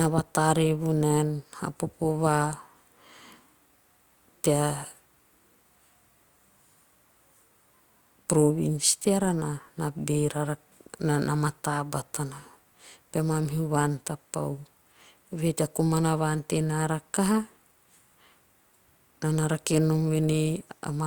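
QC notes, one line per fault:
No faults found on listening to this speech clip.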